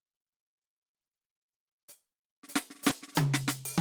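At 2.89 s, about 20 ms of the music never reached the decoder in time, a short concealed packet loss; the receiver extended the preceding sound, leaving a brief smear.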